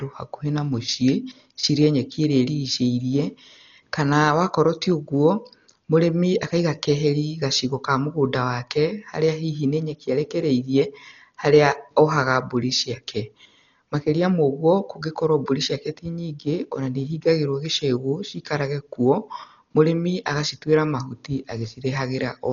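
From start to finish the speech sounds dull and boxed in, with nothing at all above about 6.9 kHz, and there's a rough, fluttering hiss clinging to the voiced parts. That's heavy damage that fits Dolby Digital compression at a very low bitrate, likely around 40 kbps. At that rate the encoder cuts the band short and starves many frequency lines of bits, so the decoder fills those gaps with noise instead of real detail.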